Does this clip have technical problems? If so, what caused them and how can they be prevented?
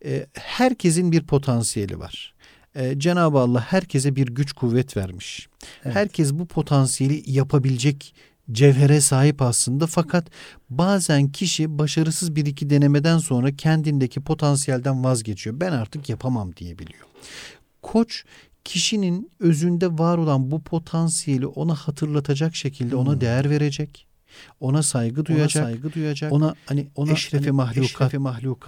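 Yes. From 25.29 s to the end, a doubled audio track appears: a dry, full-band copy follows roughly 0.7 s behind, around 5 dB quieter, starting abruptly. This is likely a second, slower capture path mixed in alongside the original. To prevent it, route the source through only one capture path and mute any duplicate monitoring or loopback input.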